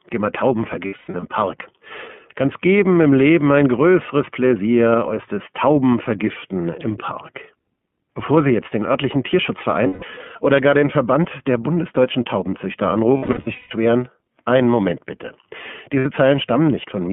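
Across the whole clip the speech sounds boxed-in and a little rough and synthetic, with nothing below about 150 Hz or above 3.4 kHz. This is plainly audible damage from the iLBC codec, a narrowband VoIP coder that rebuilds each frame's excitation on its own. The bandwidth and texture fit its 13.33 kbps mode with 30 ms frames.

Lost iLBC frames cause four dropouts, where the speech turns into a held, faintly buzzy, breathy vowel. The first is a broken run from 0.86 to 1.24 s, with the longest hold lasting around a tenth of a second. The second is a single hold from 9.87 to 10.03 s. The third is a scattered stretch from 13.17 to 13.72 s, with the longest hold around a fifth of a second. The fourth is a brief hold from 15.99 to 16.06 s. In each case packets went missing and the decoder repeated the last pitch cycle mixed with noise. Because every iLBC frame stands alone, the voice is right again almost immediately after each gap.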